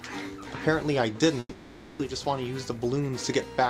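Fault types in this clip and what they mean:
Long network dropout: At 1.39 s the sound gives way to a fading buzz or hiss continuing it for 0.6 s, then 30 ms of silence. It resumes at 2.01 s with 0.6 s missing. Audio packets likely stopped arriving during that stretch.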